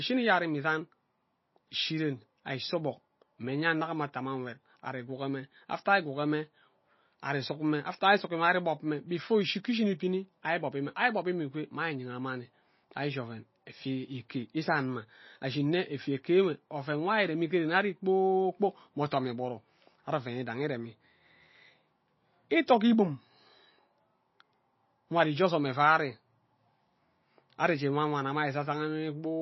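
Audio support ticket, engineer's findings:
Speech sounds watery and swirly from start to end, treble gone above 5.8 kHz. Probably MP3 compression, with the encoder starved of bits. Sounds like a low bitrate, around 24 kbps. Hard lowpass plus weak bands flickering in and out frame to frame. S sounds go chirpy and consonant attacks smear.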